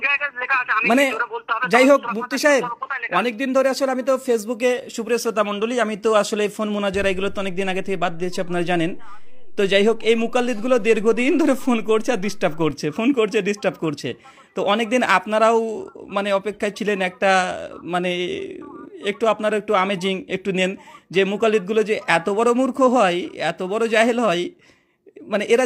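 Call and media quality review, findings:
DC step at 7.0 s: zero line jumps by about -28 dBFS, holds, steps back at 12.71 s. Low thump at each edge; sound continues intact, unlike a dropout. Probable converter recalibration or offset input switched into path.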